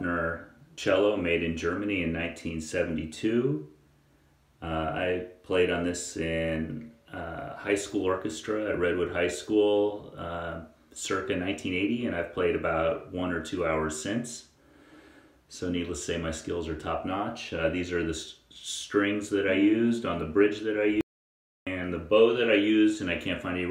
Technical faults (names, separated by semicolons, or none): audio dropout to silence